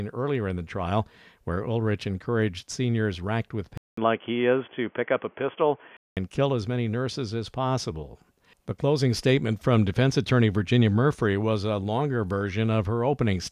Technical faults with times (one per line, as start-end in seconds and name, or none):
3.77-6.17 input switched to a poorer device